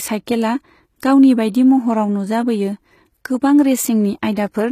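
Throughout, the treble sounds gritty and metallic, with s sounds turning lispy and nothing above 14.9 kHz, likely HE-AAC compression rebuilding the highs from copied lower bands, consistent with roughly 20 kbps. At 4.35 s, a brief hiss of about 17 ms softens an attack: pre-echo, where the codec's block-wide quantisation noise leaks ahead of the transient.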